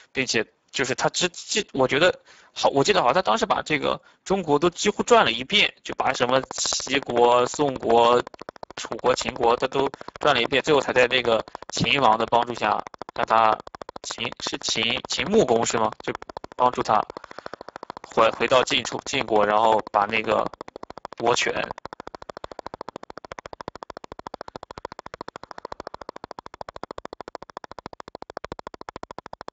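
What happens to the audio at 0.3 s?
At 0.3 s the Speex codec damage is already present, as it is throughout the clip. Starved of bits for the excitation signal, which fits a low setting near 10 kbps, the speech sounds noisy and hoarse, and nothing remains above 7.7 kHz.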